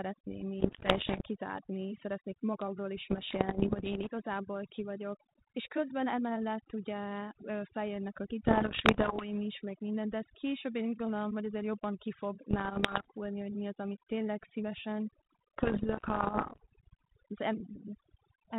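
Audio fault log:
throughout: overdone noise removal. The noise reduction is set far too aggressively, so frequency bands that sit near its noise estimate are pulled down or cut outright, and the quieter parts of the speech are cut with them. Between phrases the background drops to near silence with isolated twinkling specks.
0.60–1.22 s, 3.10–4.09 s, 8.46–9.29 s, 12.51–13.05 s, 15.58–16.65 s: bit errors on an ADPCM link. The first burst ends just before "kizárni szeretnék magamról is". The third falls between "emellett ugye feljönnek a" and "is meg minden de", and the fifth follows "az amit tényleg szívesen". Each burst brings pops, rough crackle and short jumps in level. Flipped bits throw off the decoder's step size and predictor, so every error rings on for some milliseconds. The error rate is roughly 1 to 3 percent, heaviest in the first burst. The band-limited telephone sound fits a G.726 path at 32 kbit/s.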